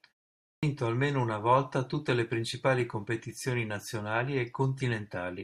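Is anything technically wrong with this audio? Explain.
Yes. Right after a short pause of about 0.35 s, the audio comes back at 0.4 s with its opening chopped off. That's a clipped start after a pause: the output device dozed off during the silence and took until about 0.63 s to wake and lock again, so roughly 230 ms of speech just vanishes. You hear "almeno una volta tutte" pop in abruptly out of dead quiet, missing its first sounds, with no natural onset at all.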